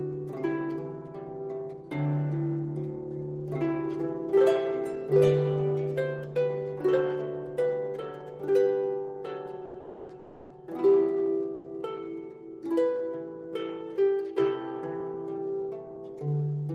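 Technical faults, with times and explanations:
9.65 to 9.76 s, short stall from a late packet: the last sound is held about 90 ms while a packet arrives late; the spectrogram shows briefly frozen, smeared harmonics.
9.80 to 10.11 s, 10.19 to 10.52 s, 11.54 to 11.66 s, call audio freeze: the sound turns into a fading buzz for 290, 310 and 100 ms, likely from packets held up in transit, then resumes. Each shows as a flat, stretched spectral band with no gap in the waveform.
14.83 to 16.56 s, jitter buffer speed-up: the audio runs about 5% fast at unchanged pitch as the receiver trims short pitch-period slices to shed about a tenth of a second of delay. The spectrogram's patterns appear slightly compressed in time.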